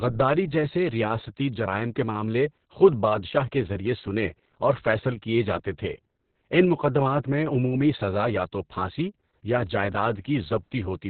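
From start to finish the speech carries heavy Opus voice compression damage: nothing survives above about 4.3 kHz, consistent with narrowband SILK coding, and the coarse excitation leaves it muffled, hoarse and somewhat robotic, which points to a bitrate near 6 kbps.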